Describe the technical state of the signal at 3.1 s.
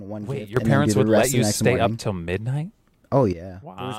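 At 3.1 s the signal sits inside a sudden gain jump running from 0.57 to 3.33 s, raised by about 12 dB, likely from a gain setting applied instantly without a ramp. Speech and background noise step up together, unlike compressor pumping, which swells gradually.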